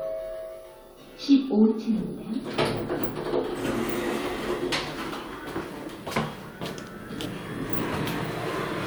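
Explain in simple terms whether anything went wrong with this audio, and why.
Nothing went wrong with this recording of sounds. At no point does the audio break, jump or change in a way that points to a technical problem.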